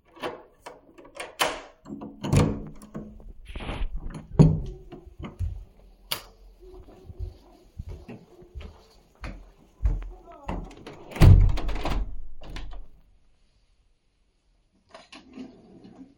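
A recording of everyday sounds that abruptly turns duller and swirly at 13.06 s and stays that way to the end at 16.17 s, with no gap or dropout at the switch. The treble is gone above 10.6 kHz, and the grainy, smeared texture sounds like an adaptive stream at a lower bitrate: the player dropped to a leaner encode, roughly from around 128 kbit/s MP3 down to something nearer 40 kbit/s, when the connection slowed.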